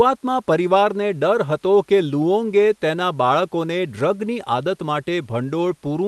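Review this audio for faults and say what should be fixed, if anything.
There are no faults to fix in this speech clip, so nothing needs to be fixed.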